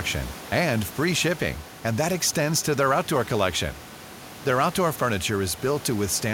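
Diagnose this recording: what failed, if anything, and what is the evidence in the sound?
Nothing failed at any stage; the only thing present beyond the speech is the room's own background noise, sitting about 19 dB below the voice level, which belongs to the acoustic recording rather than to the system.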